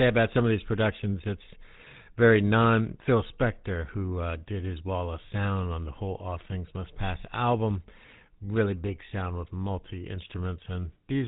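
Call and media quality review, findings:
GSM full-rate codec artefacts, whole clip: buzzy, gravelly roughness on speech, nothing above about 3.8 kHz. Pulse-excited vocal-tract model, consistent with 13 kbps full-rate. Unlike plain band-limiting, the texture itself is coarsened, not just dulled.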